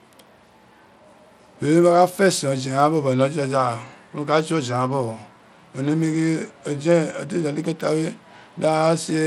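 From start to finish the treble of the speech sounds unsteady, flickering in and out, with a gritty, grainy noise and some aliasing riding on the sound. Energy still reaches about 20.8 kHz, so the top is not simply cut off. The likely cause is Bluetooth SBC compression at a small bit pool, consistent with a rate near 96 kbps. Too few bits leave the weak upper sub-bands starved and coarsely quantised.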